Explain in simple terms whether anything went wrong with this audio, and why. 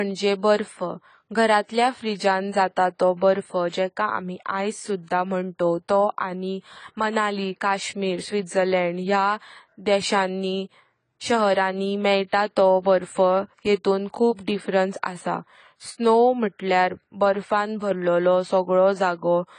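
Yes, something's off the whole way through this speech clip: it sounds dull, with nothing above 10 kHz, and the compression damage is plainly audible. That's likely AAC compression, where the encoder squeezes the file by throwing away the top end and coarsening the detail that's left.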